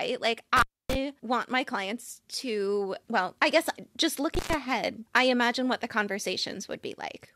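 Intermittent contact occurs at 0.57–0.95 s, before "want my clients to", and at 4.35–4.54 s, between "well I guess just" and "I imagine what the". A loose connection opens for about 270 ms, then about 110 ms, dropping the speech to faint hiss. Crackle at each edge sets it apart from a clean digital dropout.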